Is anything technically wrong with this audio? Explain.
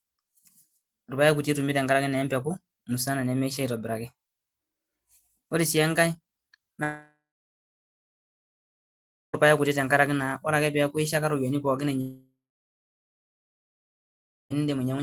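Yes. Long network dropouts at 6.83–9.35 s and 12.01–14.52 s: the speech likely stopped arriving for about 2.5 s each time. The last sound trails off as a fading buzz, then roughly 2.1 s of silence follows before speech resumes, with that stretch lost.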